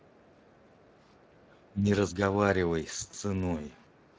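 Throughout the clip the speech carries the hoarse, noisy grain of the Speex codec, which fits a Speex stream running around 20 kbps. Unlike plain background hiss, the roughness is part of the speech itself, a buzzy CELP texture that follows every syllable rather than sitting beneath it.

From 0.0 to 0.99 s a second voice is faintly audible under the talker, far quieter than the main speech, most likely the other side's voice leaking through from a loudspeaker that the echo canceller did not fully remove. It returns as a brief scrap at 1.64 to 1.71 s and again from 3.92 s to the end, even fainter. It is a separate voice, not a smeared copy of the talker's own words, so it is not reverberation.

At 1.28 to 1.44 s the room sound dips by about 8 dB for roughly 150 ms and then comes back. This is background gated by the echo canceller. It is the room sound that sinks, which separates it from the double-talk dips that follow.

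At 1.72 to 1.89 s the talker's own voice drops by around 10 dB, and at 2.11 to 2.19 s by about 5 dB, likely speech suppressed in double talk. Each dip pulls down the speech itself, so it is not a level change made by the talker.

At 3.11 s a brief buzzy or noisy smear replaces the speech, which points to a single lost 20 ms frame. This is VoIP packet loss concealed by the speech codec, where the decoder extended the last pitch instead of leaving a silent gap. That fill-in is what separates it from a hard dropout.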